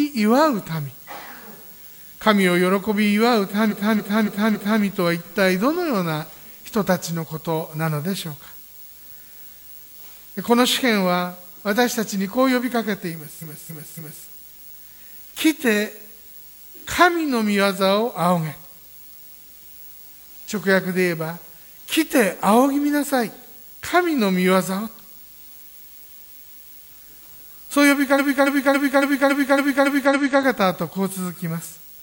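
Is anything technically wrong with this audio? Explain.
Yes. There are four episodes of repeated frames, where a short block of encoded audio is played back-to-back again and again. This happens from 3.67 to 4.79 s (a 278.6 ms block, four extra plays), 13.38 to 14.22 s (278.6 ms, three), 25.73 to 26.85 s (185.8 ms, six) and 28.15 to 30.38 s (278.6 ms, eight). Each is heard as a rhythmic stutter. Together they add about 5.3 s to the audio.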